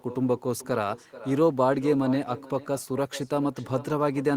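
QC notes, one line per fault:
Throughout: echo with no canceller. A quieter, thinner copy of the speech trails each phrase by roughly 0.4 s, at about 16 dB below it, because the far end's loudspeaker feeds its microphone uncancelled. The waveform shows faint delayed repeats; the spectrogram shows smeared, offset ghost harmonics.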